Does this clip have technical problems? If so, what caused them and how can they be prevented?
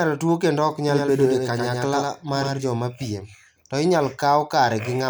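Yes. A doubled audio track runs from 0.88 to 2.70 s, starting after "tuo kendo ok" and ending before "mapiem to inyalo". A dry copy of the speech trails about a tenth of a second behind, around 5 dB quieter, and switches on and off abruptly. The likely cause is a second, slower capture path or an edit holding two misaligned copies. To prevent it, monitor only one input route and check edits for duplicated, overlapping regions.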